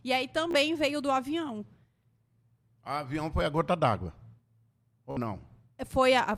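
Bluetooth stutter hits this speech recording at 0.51 to 0.54 s, just before "veio do avião", and again at 5.11 to 5.17 s. Audio packets failed to arrive in time, so the receiver kept replaying its last short slice of buffered sound, producing a brief buzzing repeat. About 29 ms is lost in the first gap and about 58 ms in the second, which suggests a couple of dropped packets and then roughly twice that.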